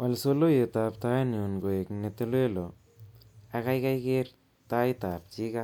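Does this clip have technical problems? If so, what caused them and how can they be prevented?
No, there are no technical problems to report here.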